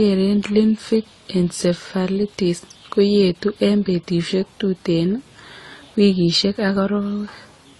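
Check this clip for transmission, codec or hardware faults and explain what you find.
One fault runs through the whole clip. The speech sounds dulled, with nothing above 12 kHz, and carries a mixed, layered coding roughness where two different kinds of compression artefact are heard together. This is likely transcoding between lossy codecs, pointing to a low-rate AAC encode that was later re-encoded as Opus. The second codec spends bits reproducing the first one's artefacts and adds its own, while the lower 12 kHz cut-off survives the chain.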